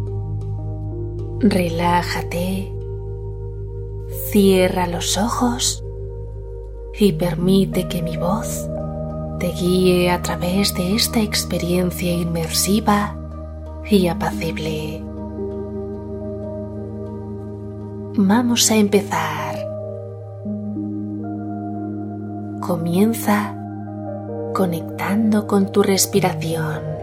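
Nothing technically wrong turns up anywhere in the audio, so there are no times or causes to report.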